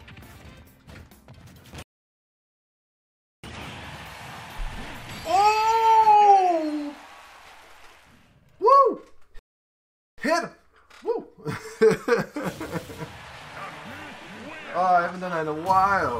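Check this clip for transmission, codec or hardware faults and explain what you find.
Two playback stalls interrupt the sound. The first runs from 1.83 to 3.44 s, about 1.6 s. The second runs from 9.39 to 10.18 s, about 0.79 s. Each time the audio drops to silence mid-flow, then resumes. The player likely ran dry of data or was blocked.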